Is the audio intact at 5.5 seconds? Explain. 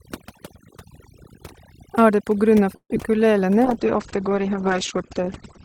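No. At 5.5 seconds the speech sounds rough and muffled, with its top end gone. This is a call bitrate drop lasting from 3.65 s to the end of the clip at 5.65 s. The audio bandwidth narrows from about 20 kHz to 8 kHz, and the coarse, watery texture points to the encoder cutting from roughly 32 kbps to 13 kbps after the call's bandwidth estimate fell. With so few bits, the codec quantises more crudely and discards everything above 8 kHz.

Layered under that is overdone noise removal, present across the whole clip. The background drops and breaks up into twinkling, warbling specks. A noise reducer set too aggressively is pulling individual frequency bands down or out whenever they come close to its noise estimate, and the quieter parts of the voice are removed along with the noise.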